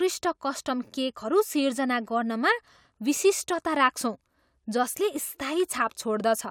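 Nothing stood out on listening to this speech recording.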